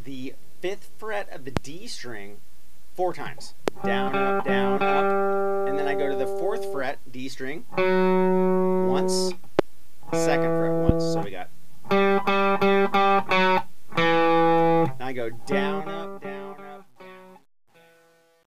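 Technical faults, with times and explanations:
1.57–1.59, 3.68–3.70, 9.59–9.61, 10.89–10.92 s: loud pop. Each is a single sharp pop about 20 dB above the sound, which continues underneath, likely from a voltage glitch such as a switch, plug or static discharge.
15.42–18.53 s: truncation distortion on a fade. The fade-out loses resolution as the level falls, consistent with roughly 10-bit undithered truncation, and turns gritty from 16.31 s onward.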